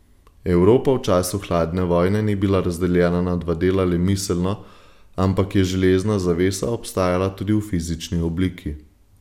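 Listening through the recording, nothing stood out as a technical fault at any point.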